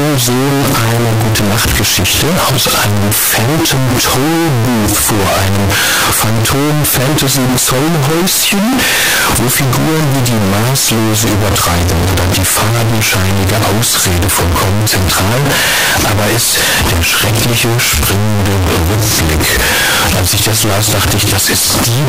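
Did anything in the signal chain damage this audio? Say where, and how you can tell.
Yes, at the sample-format conversion stage, for the whole clip. The speech is pinned at a nearly constant, very loud level with a harsh, almost square waveform, and background noise comes through as loud as the talker, yet pitch stays followable. That points to a likely float read as integer error: 32-bit float samples interpreted as 32-bit integers, so sign and exponent bits dictate amplitude. Ordinary clipping would leave quiet passages quiet; here nothing is quiet.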